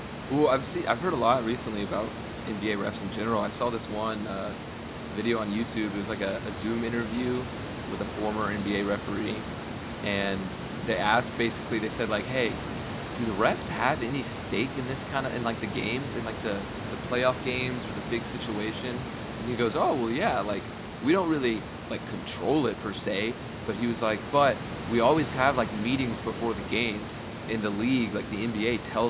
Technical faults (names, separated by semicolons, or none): none